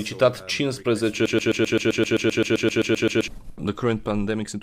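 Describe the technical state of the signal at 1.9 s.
At 1.9 s the signal is caught in a broken-record loop. It runs from 1.26 to 3.28 s. A 130 ms fragment repeats exactly, back to back, 16 times. The likely cause is a stalled player or stream resending its last buffer. The intended audio is lost.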